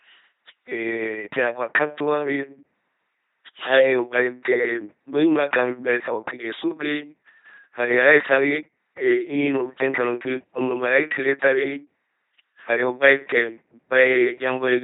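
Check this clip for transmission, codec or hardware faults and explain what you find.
One codec fault runs through the whole speech clip. From start to finish the speech is buzzing, mechanical and robotic, with nothing above 3.9 kHz. That fits an LPC-10 vocoder near 2.4 kbit/s, which rebuilds each moment from a ten-pole filter driven by pulses or noise.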